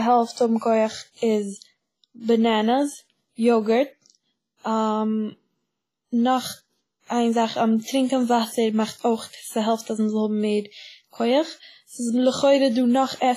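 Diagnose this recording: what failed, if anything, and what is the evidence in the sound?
The codec stage is where this went wrong, and it's there for the whole clip. The speech has a ringing, washy quality, with a hiss that breathes up and down with the signal, and nothing survives above about 15.3 kHz. That's likely heavy WMA compression, at a rate that fits something around 24 kbps. Long transform blocks smear quantisation noise over tens of milliseconds around each sound, and the weaker spectral lines get zeroed out.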